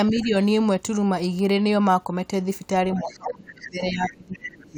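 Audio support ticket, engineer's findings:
Speech suppressed in double talk. 0.11–0.35 s: shallow dip of about 5 dB, around 0.2 s of speech affected. 2.97 s to end: deep drop of roughly 20 dB, speech pulling back for about 2 s. Likely cause: echo canceller's double-talk handling. Near-end talker and far-end loudspeaker signal overlapped, the canceller couldn't tell them apart, and it attenuated the whole mic path instead of only the echo.

Other side's voice leaking through. 0.15–0.28 s: faint second voice, well down, around 25 dB below the talker. 3.07–3.33 s, 3.61–3.68 s, 4.34–4.51 s: stronger scraps, about 15 dB under the talker, short. Likely cause: residual acoustic echo. Far-end audio from the talker's loudspeaker reached the mic, and the canceller left part of it in during the same overlapping stretches where it was suppressing the near-end speech.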